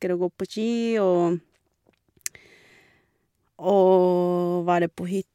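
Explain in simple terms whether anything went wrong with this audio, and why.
Nothing went wrong; no faults can be heard anywhere.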